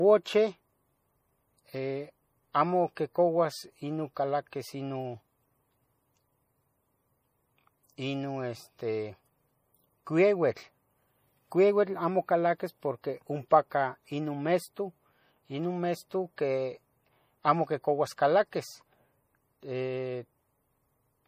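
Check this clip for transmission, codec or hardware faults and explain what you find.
One codec fault runs through the whole speech recording. MP3 compression is the likely cause, and its damage is plainly audible throughout. The sound fits a low bitrate of around 40 kbps. Short of bits, the encoder zeroes weak frequency lines that flicker on and off between frames and removes everything above 15.3 kHz. The result sounds watery and swirly, with chirpy s sounds and smeared attacks. A spectrogram shows a flat ceiling at 15.3 kHz and patchy, speckled gaps beneath it.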